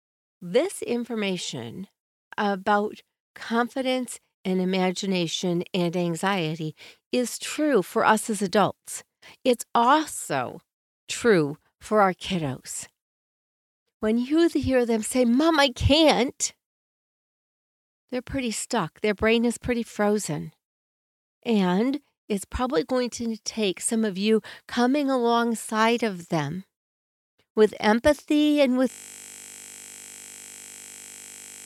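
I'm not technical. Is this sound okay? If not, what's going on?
No. At 28.90 s the speech turns into a steady buzz that lasts to the end. This is a system hang loop: the computer froze while the sound hardware kept replaying one 20 ms slice, repeating 50 times per second, unlike mains hum, which runs underneath the speech.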